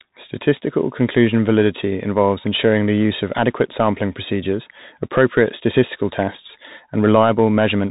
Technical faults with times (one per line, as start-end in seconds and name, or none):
0.00-7.90 Bluetooth CVSD headset codec